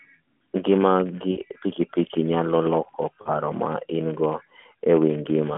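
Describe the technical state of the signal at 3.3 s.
Right after "piki piki nyalo loko", from about 3.22 to 3.30 s, the speech smears into a brief warble and sags in level, then recovers weak for a moment. These are lost AMR speech frames. Roughly 40 ms went missing, which fits two 20 ms frames failing their check. The decoder filled the gap by repeating the last good pitch and vocal-tract settings while lowering the gain, so the sound stretches and dips instead of cutting out.

Under this, and through the whole clip, there is a steady 100 Hz buzz that rises and falls with the speech level. This is a filter restarted on every block. The filter loses its memory at each block boundary and starts again from silence, so every block opens with a small click. Those clicks repeat at the block rate and merge into the buzz. The AMR narrowband path carrying the audio is heard as its usual telephone-band sound.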